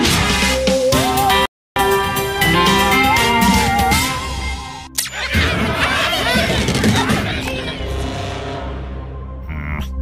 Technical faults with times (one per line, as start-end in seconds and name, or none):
1.46-1.76 Bluetooth stall